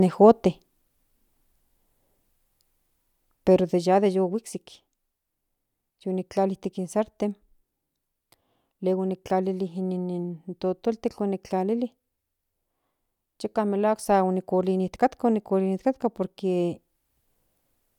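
No technical faults are audible.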